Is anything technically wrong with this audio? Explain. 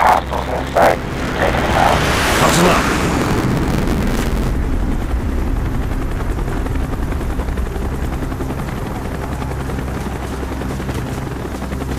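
Yes. From 0 to 4.51 s an 86.1 Hz robotic buzz rides the signal: buffer tearing, where writer and reader cross every period, so roughly a third of each buffer, which fits 512 samples, holds audio around 50 ms old.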